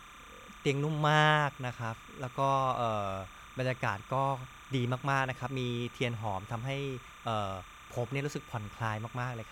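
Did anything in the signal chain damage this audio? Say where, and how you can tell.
Yes. Timecode bleed runs through the whole speech clip, a steady chirping warble behind the voice. It switches between tones near 1 and 2 kHz at 30 frames per second, around 20 dB down. Linear timecode is leaking in through analogue wiring, from an adjacent track or cable.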